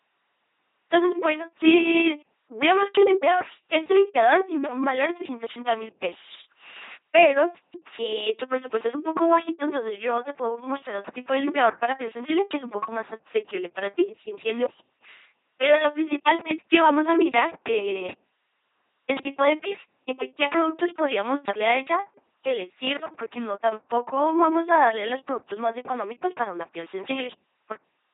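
Throughout the speech, the LPC-10 vocoder rebuilds every moment as either buzz or hiss through a ten-pole filter, giving a flat, mechanical robot voice with heavy damage, consistent with a 2.4 kbit/s rate. A spectrogram shows rigid harmonic combs or noise bands, empty above 3.8 kHz.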